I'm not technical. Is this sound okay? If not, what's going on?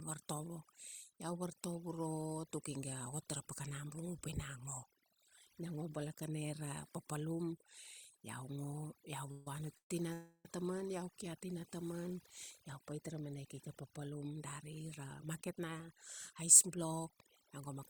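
No. Overdone noise removal means a noise-cleaning tool was set too strong, stripping away quiet parts of the speech along with the hiss, so the background breaks up into twinkling, warbling specks throughout.

At 9.31–9.47, 9.77–9.91 and 10.13–10.46 seconds, the sound briefly hangs as a fading buzz, sometimes dropping to silence, then resumes exactly where it stopped. This is a call audio freeze, likely caused by delayed network packets leaving the call temporarily without audio to play.

From 14.11 to 15.89 and from 16.32 to 17.77 seconds, a jitter buffer speed-up plays the speech about 7% faster at the same pitch to catch up on built-up delay, trimming roughly 0.15 seconds the first time and 0.1 seconds the second, and making it sound hurried.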